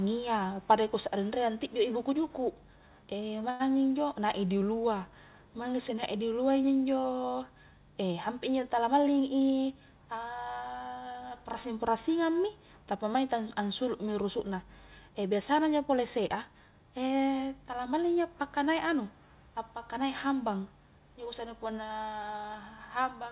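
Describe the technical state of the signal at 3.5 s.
At 3.5 s there is a short stall from a late packet, lasting until about 3.62 s. The jitter buffer ran dry, so the last sound is stretched for about 96 ms and then resumes without loss, held slightly too long with a faint buzz or dip. On a spectrogram, already band-limited at 4 kHz, flat repeated harmonics appear, and the waveform shows a periodic, looped stretch.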